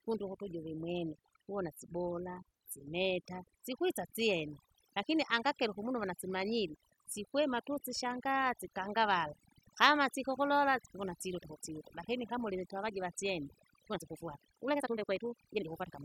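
A speech recording with overdone noise removal throughout: the reduction is set so aggressively that individual frequency bands near the noise floor are pulled right down, leaving a lowered background with twinkling specks and a voice whose quieter components were stripped. From 13.83 s to the end at 16.05 s, right after "lakini kama urinitavajiva syene", the pace jumps to about 1.76 times normal while pitch holds steady. The delivery turns rushed, which points to a likely time-stretched section where short pieces were dropped to compress that stretch into less time.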